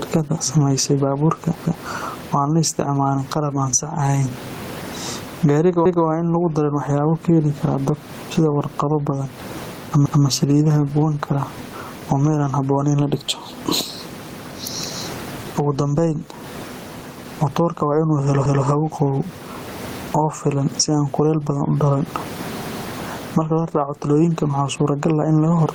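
Gain pumping runs through the whole recording, most likely because the input gain is set far too high and a fast limiter or compressor keeps hauling it back down whenever the speech gets loud. The gain swings by something like 20 dB, and the room noise sits about 31 dB below the speech. Loud and quiet passages sit unnaturally close in level, and the speech sounds squashed.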